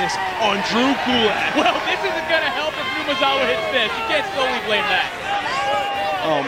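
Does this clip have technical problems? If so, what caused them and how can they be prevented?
Yes. Computer activity noise runs throughout the clip as a buzzing, chirping layer pulsing around 150 times a second, about 20 dB below the wanted sound. Processor and graphics load changes disturb the ground shared with the audio circuit. Powering the audio interface separately, adding a ground-loop isolator, or recording on a machine that is not under load prevents it.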